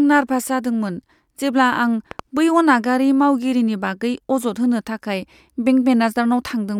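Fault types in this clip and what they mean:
Loud pop: two sharp pulses from 2.11 to 2.21 s, between "जेब्ला आं" and "बै अनागारि मावगिरिनि बागै", roughly 10 dB above the speech, which continues underneath, likely from a switch or static voltage glitch. Waveform: tall narrow spikes. Spectrogram: thin full-band vertical lines.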